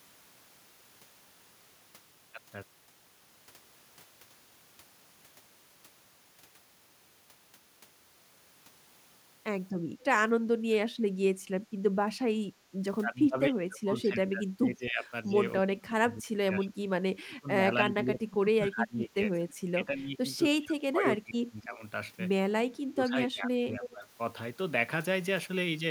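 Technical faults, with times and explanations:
10.46–11.24 s, 12.06–12.11 s, 13.05–16.9 s, 17.21–21.82 s and 22.69–24.09 s: speech suppressed in double talk. The speech dips sharply and breaks up in pieces. The deepest drop is about 30 dB, near 10.5–11.2 s. The brief one at 12.06 s falls only about 10 dB. The long stretches from 13 s to 22 s lose about 25 dB. The likely cause is an echo canceller that mistook this talker for loudspeaker echo while both sides spoke, and turned everything down.
23.84–23.93 s: echo leak. A short, faint scrap of delayed sound slips through, about 10 dB below the speech. It trails the original by 255 ms, so it sounds like a quick, separate repeat rather than added reverberation. It likely comes from a far-end loudspeaker whose echo canceller did not fully remove what its microphone caught, so a remnant was sent back. It falls inside the last suppressed stretch.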